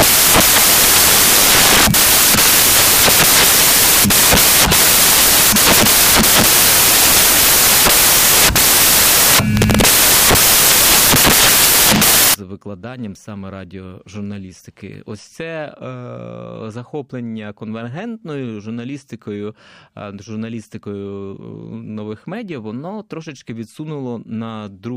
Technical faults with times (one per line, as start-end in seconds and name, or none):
0.00-12.34 samples built from the wrong bytes